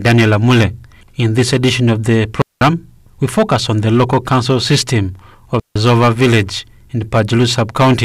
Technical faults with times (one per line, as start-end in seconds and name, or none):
0.00-8.04 hard clipping
2.42-2.61 digital wireless dropout
5.60-5.76 digital wireless dropout